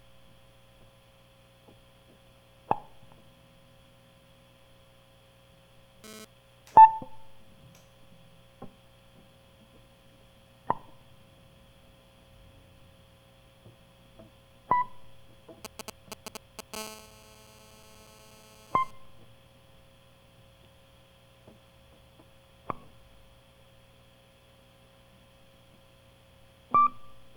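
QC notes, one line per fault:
6.04–6.25 s, GSM phone buzz: a short raspy 217 Hz burst about 12 dB under the music, a nearby phone's data transfer rectified by the audio circuitry.
15.65–16.75 s, GSM signalling bursts: a galloping dit-dit-dit of brief 217 Hz buzzes, fairly loud against the music, from a phone's short radio bursts being rectified.
16.76–18.91 s, GSM phone buzz: steady hard 217 Hz buzz full of harmonics, about 15 dB below the music, a call's continuous transmit bursts picked up and rectified.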